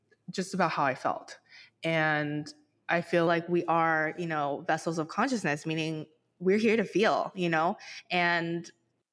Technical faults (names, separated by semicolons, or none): wrong sample rate